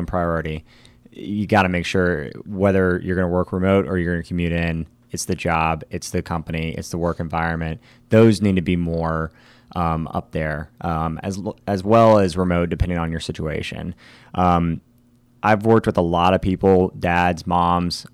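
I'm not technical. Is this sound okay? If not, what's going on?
No. Hard clipping at 1.53, 5.52, 8.14, 11.92, 14.44, 15.46 to 16.30 and 16.65 to 17.26 s: the loudest moments exceeded what the recording could hold, so their peaks were chopped flat, causing brief crackly distortion.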